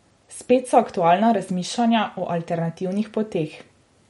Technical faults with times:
0.00-4.09 MP3 compression

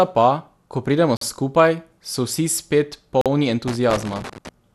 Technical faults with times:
0.00-4.75 MP2 compression
1.17-1.21 gap between chunks
3.21-3.26 gap between chunks
3.68-4.49 loose connector crackle

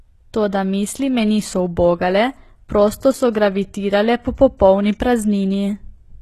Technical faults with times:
0.00-6.22 HE-AAC compression

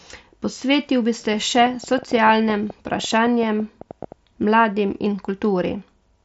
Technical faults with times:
1.34-4.13 train of clicks

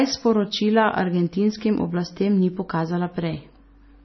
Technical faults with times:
0.00-4.05 MP3 compression

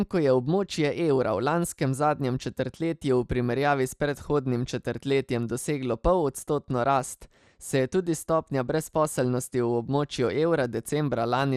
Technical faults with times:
0.00-11.56 MP2 compression

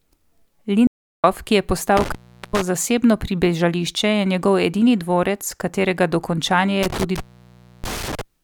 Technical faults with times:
0.87-1.24 audio dropout to silence
1.97-2.61 intermittent contact
6.83-8.21 intermittent contact

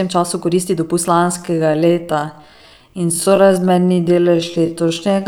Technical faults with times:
1.06-5.28 time-stretched section

